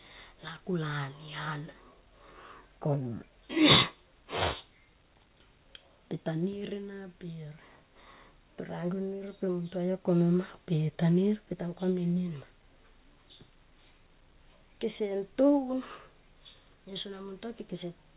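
Speech recording with no technical faults to report.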